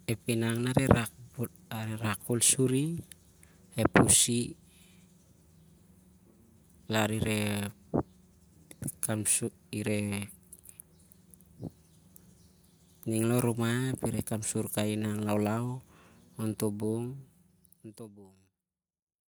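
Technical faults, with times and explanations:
No technical faults can be heard in this speech recording.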